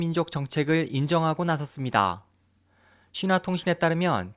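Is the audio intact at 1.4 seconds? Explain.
Yes, the audio is intact at 1.4 seconds; no fault can be heard at that point in the speech.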